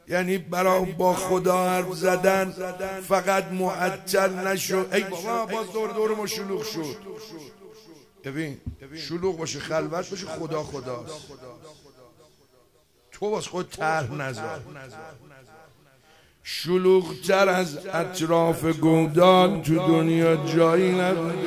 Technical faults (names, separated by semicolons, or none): none